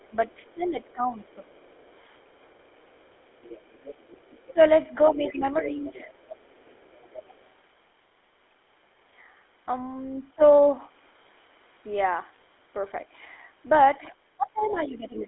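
Across the whole recording the speech has a buzzy, gravelly roughness, and nothing reaches above 3.8 kHz. The usable band sits at roughly 300 Hz to 3.5 kHz. This is the GSM full-rate codec. It models the vocal tract and excites it with a sparse, regularly spaced pulse train, keeping only a third of the excitation samples, which produces that coarse grain. The damage is plainly audible and fits a 13 kbps full-rate stream.

From the start to 7.45 s a faint second voice runs underneath the speech, sitting about 25 dB below it. It returns from 14.65 to 15.24 s, clearly louder this time at about 15 dB down. This is the other side's voice leaking through. The far-end audio was likely played on the talker's loudspeaker and picked up by the microphone, and the echo canceller did not fully strip it out.

The main speech dips in level at several points. This happens from 0.09 to 1.68 s for around a second in total, dropping by as much as 15 dB. 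It happens again briefly between 4.53 and 4.59 s. From 5.14 to 5.84 s it dips by up to about 10 dB. From 14.09 s to the end it falls by around 15 dB. This is speech suppressed in double talk: with both sides talking, the canceller likely couldn't separate its own talker from the echo and turned everything down.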